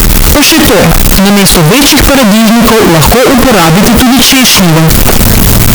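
From start to finish, the speech was likely stored as 32-bit float samples but read back as 32-bit integers, a float read as integer fault. The sign and exponent bits then dominate each value, flattening the waveform into a near-square shape at an almost fixed, high level. It sounds very loud and harsh, background noise rises to the level of the speech, and pitch can still be followed.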